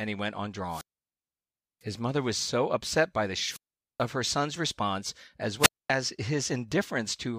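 Wireless microphone squelch dropouts cut into this speech recording three times: from 0.67 to 1.84 s after "he went on" (about 1.0 s of muting, speech returning at "mother was so upset"), from 3.40 to 4.06 s after "so upset by the" (0.44 s muted, back at "her son's response as"), and from 5.59 to 5.90 s after "her son's response as" (0.24 s muted). Each time the FM radio link fades, hiss swells briefly, then the receiver's squelch shuts the output to near silence until the signal recovers.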